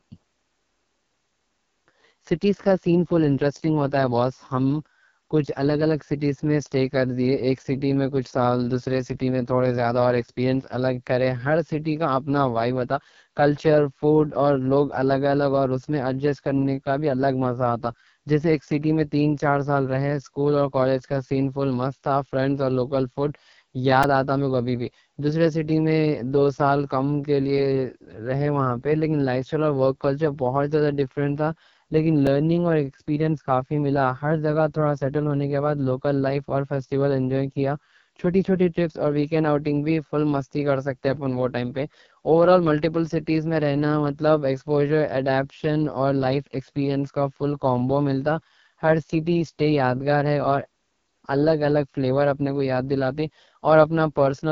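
The speech was carried throughout by the AMR wideband (HD Voice) codec at one of its lowest rates. The harsh texture fits 6.6 kbit/s. At that rate the vocal tract model gets too few bits to shape each sound properly, so the codec damage is heavy and the speech comes out rough and raspy. Nothing is present above 7.4 kHz, and the top of the band is thin, noise-like filler rather than real detail.

At 24.03 s, just before "آتا میں کبھی", a repeated buffer occurs. The output ran dry, and the device replayed its last chunk three extra times. The chunk is about 2.9 ms long, which fits a 128-sample buffer. The repeats are too short to hear as a stutter. They come across as a brief buzzy click, and about 10 ms of real audio is lost behind them. At 32.27 s, just before "اور ایکسپیرینس کافی", the same fault recurs with a single extra play. It produces a smaller click and drops only a few milliseconds of sound.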